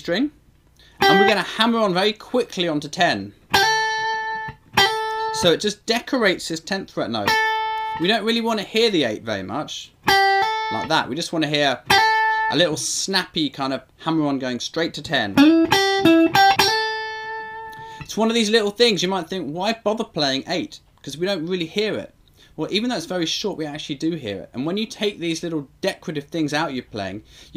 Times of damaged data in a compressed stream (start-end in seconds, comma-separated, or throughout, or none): 16.56